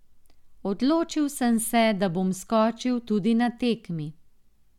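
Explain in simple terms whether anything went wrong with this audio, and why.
Nothing went wrong in this speech recording; there's no dropout, glitch or distortion anywhere to hear.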